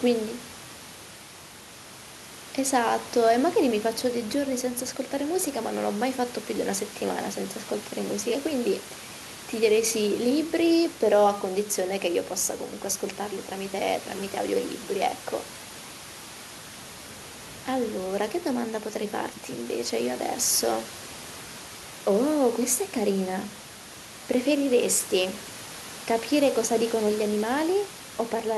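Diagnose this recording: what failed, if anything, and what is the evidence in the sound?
Nothing stood out on listening to this speech recording, and the steady room noise sitting about 15 dB below the speech is part of the acoustic environment rather than anything the system did.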